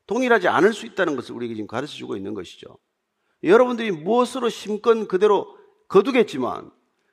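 No technical faults can be heard anywhere in this recording.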